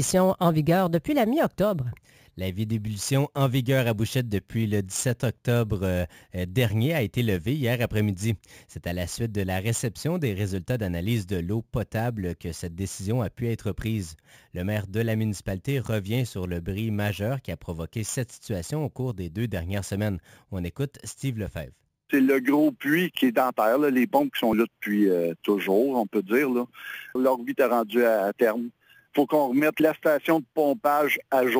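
Imaging from sample-and-hold upsampling runs through the whole clip. The audio appears to have been raised to a higher rate by holding each sample with no smoothing filter afterward, which fits a 16 kHz original. Mirror copies of the spectrum sit above the true content, the first spanning 8 to 16 kHz at about 21 dB below the signal. They come through as a bright metallic fizz that swells and fades with the sound, its lowest copy moving against the pitch.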